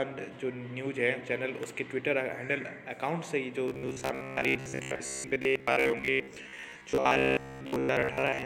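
From 3.68 s to 8.45 s the audio turns into a rigid, metallic buzz pitched at 66.8 Hz, the robotic sound from repeated short buffers. A short segment of about 15 ms is being replayed over and over. This is likely because new audio arrives too seldom, so most of the real signal is skipped and replaced by repeats.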